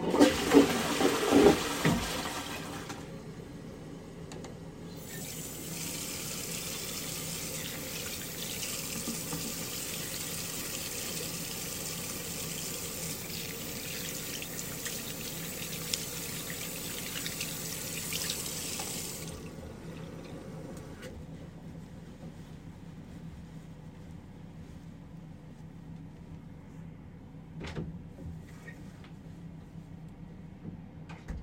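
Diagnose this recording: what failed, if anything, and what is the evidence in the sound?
Lost LE Audio frames at 5.22 to 5.24 s, 10.56 to 10.67 s and 18.37 to 18.40 s: a failure on the Bluetooth wireless link, covered up by the LC3 decoder. The first and last gaps each last about 22 ms, which fits three 7.5 ms frames. The middle one is scattered losses across 105 ms, each run no more than about 20 ms. The decoder fills each hole by replaying the last spectrum with random signs, so the sound briefly turns into a noisy smear.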